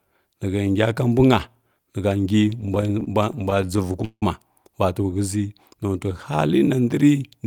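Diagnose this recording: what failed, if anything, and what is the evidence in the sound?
Repeated stalls (stutter) at the network/jitter buffer stage, 2.45 to 4.23 s: the speech halts in 22 short gaps, the longest 173 ms, each bridged by stretching the previous sound. About 404 ms is filled in, roughly 23% of that span. Nothing is lost, but delivery drags and stutters as the buffer keeps underrunning.

Jitter buffer slow-down, 5.71 to 6.81 s: the speech runs at about 91% speed with unchanged pitch, adding 111 ms. The receiver repeated single pitch periods and slices of pauses to rebuild its reserve, which draws out the sounds.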